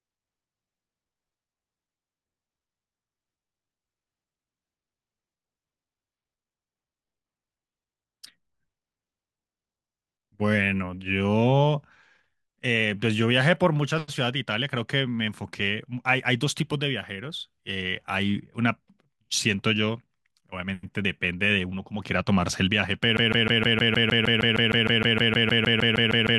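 The stream likely stalled at 23.17 s and replayed its last held fragment: a broken-record loop of a 155 ms piece, repeating 21 times until the end.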